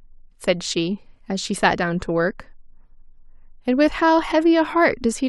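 At 3.87 to 3.89 s the speech jumps forward as compressed frames are skipped, here what sounds like a single frame of about 23 ms. That frame never reached the output, either missing from the file or rejected by the decoder as damaged, so roughly 20 ms of speech is lost. A spectrogram shows a vertical mark where the harmonics shift abruptly, and the waveform shows a discontinuity in its envelope.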